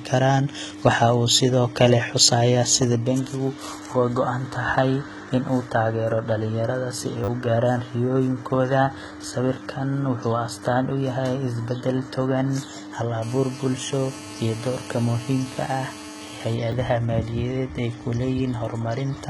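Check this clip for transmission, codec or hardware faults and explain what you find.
Three kinds of fault are present in this speech clip: a codec coloration across the whole recording, two buffer stutters, and a stretch of phone interference.

HE-AAC compression, throughout: the treble is gritty and metallic, s sounds are lispy, and nothing is present above 11.8 kHz. The likely cause is heavy HE-AAC coding at a low bitrate, around 16 kbps, where spectral band replication rebuilds the upper band by copying lower bands upward. The synthesized treble does not line up harmonically with the true low band.

Repeated buffer, at 7.24 to 7.28 s and at 16.72 s: the first falls between "taageero dhallinyarada si ay" and "gaaraan riyooyinkooda". When fresh audio arrived late, the device replayed its last block, four extra times in the first case and once in the second. The spacing fits a 10 ms buffer. 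The first repeat is heard as a brief buzzy stutter covering about 40 ms of lost audio, and the second as a single click.

GSM phone buzz, 13.2 to 16.5 s: a nearby 2G phone transmitting in bursts about 217 times a second had its radio pulses rectified by the audio circuitry. The result is a hard, raspy 217 Hz buzz with many harmonics, about 18 dB below the speech, holding steady as during a call.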